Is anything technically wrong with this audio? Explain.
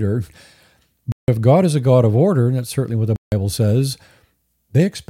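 Yes. At 1.12 s and 3.16 s, blocks of digital silence cut the speech for 160 ms each. The sound cut out abruptly, leaving short holes.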